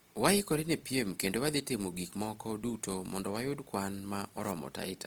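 A speech clip with plainly audible Opus compression damage throughout its length. The voice keeps a full, open top end reaching to about 20.4 kHz, yet tones sound grainy, rough and noisy, as if the finer detail had been swapped for texture. That points to the likely cause: a low-rate Opus encode in its music mode, consistent with about 24 kbps, filling starved bands with folded or noise content. Unlike MP3, there is less swirling or warbling from spectral holes, and the full bandwidth rules out Opus's muffled speech mode.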